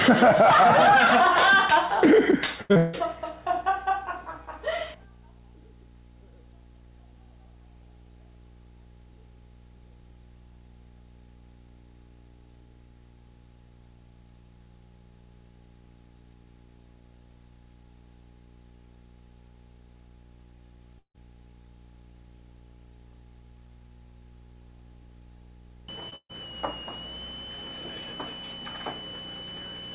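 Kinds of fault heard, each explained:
Repeated packet loss (robotic sound): From 2.46 to 2.95 s, packets go missing four times in quick succession, the longest hole 159 ms. Each time the receiver extends the last sound to cover the hole, so about 55 percent of that half-second is synthetic fill, roughly 0.27 s in total, while about 0.28 s of real audio never arrives. Because the gaps come back-to-back, the stretch sounds choppy and mechanical, with pieces missing.
Burst of packet loss: At 20.99 to 21.16 s and again at 26.16 to 26.31 s, a run of packets is lost or arrives too late to play. The receiver continues the last sound and lets it die away, about 150 ms of fill in the first gap and 137 ms in the second, ending in about 80 and 60 ms of silence respectively. Playback then resumes further on, with about 160 and 140 ms of the original skipped.
Short concealed packet loss: At 26.09 to 26.14 s, just before the second burst, a few hundredths of a second fail to reach the decoder on time. 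The receiver bridges the hole with 22 ms of continued sound in place of about 20 ms of lost audio, then blends back into the real signal. It comes across as a brief smear. The call path passes nothing above 4 kHz, which fits a G.711 mu-law link at 64 kbps.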